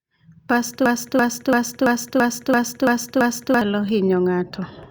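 From 0.86 s to 3.61 s the speech falls into a broken-record loop: a fragment about 336 ms long repeats exactly, back to back, eight times, so the same short slice of sound stutters for nearly three seconds before normal playback resumes. The likely cause is a stall in the player, encoder or stream that kept re-sending the last buffered fragment, and the speech that should have filled that span is lost.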